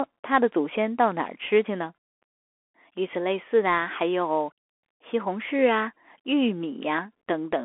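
From start to finish the speech passes through a Bluetooth CVSD headset codec. The band sits at roughly 300 Hz to 3.4 kHz, with nothing above 3.8 kHz, and a granular hiss rides under everything. Sibilants turn scratchy, and loud bright moments smear because the one-bit up-or-down steps can't keep pace. That coarse, gritty texture, which fits a 64 kbps stream, separates it from a clean telephone-band filter, which would sound muffled but smooth.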